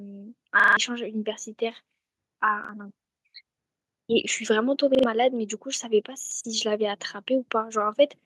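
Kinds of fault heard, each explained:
Repeated buffer: new audio showed up late, so the device just replayed its last chunk, and a 43 ms slice of speech stutters with hard joins. It happens four times, worst near 0.6 s with four extra plays; that slice length fits a 2048-sample buffer.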